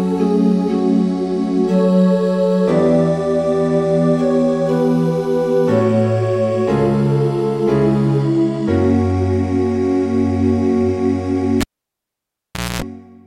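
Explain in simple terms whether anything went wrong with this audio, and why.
A cable pulled and plugged in, from 11.61 to 12.82 s. A pop, about 1.2 s of near silence, a brief 60 Hz hum, then another pop.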